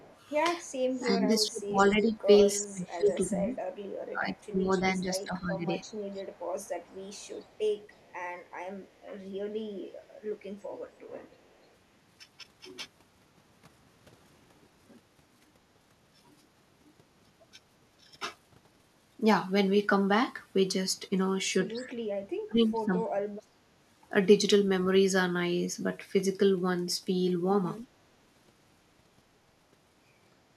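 A faint delayed copy of the speech, an echo leak, sits about 0.3 s behind the talker from 0.0 to 2.05 s, 3.05 to 5.25 s, 5.82 to 8.92 s, 10.94 to 11.68 s and 21.77 to 21.82 s. It is likely a loudspeaker echo the far end's canceller missed. It runs roughly 20 to 40 dB below the speech. On a spectrogram it shows as ghost harmonics trailing each syllable.

Overlapping the early stretches, and following the last one, the speech is suppressed in double talk from 1.0 to 3.57 s, 4.12 to 5.93 s and 21.87 to 23.59 s. The canceller likely ducked its own talker along with the loudspeaker echo. The waveform shows dips of roughly 15 to 30 dB.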